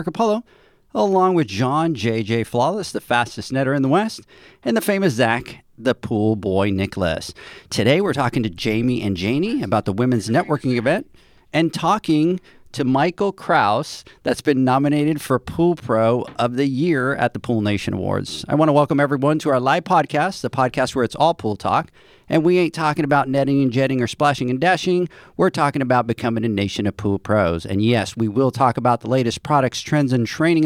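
Speech recording; no technical faults are audible anywhere.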